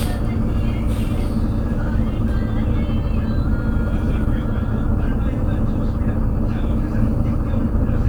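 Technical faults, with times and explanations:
No technical faults detected.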